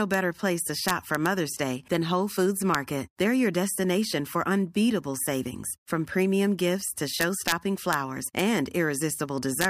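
Integer overflow cracks the speech at 0.14 s, 0.88–1.26 s, 2.75 s, 7.21–7.52 s after "from premium gifts to", 7.93 s, 8.39 s and 9.61–9.65 s. Peaks only about 1 dB over full scale wrap to the opposite sign. Each one snaps sharply, far harsher than clipping.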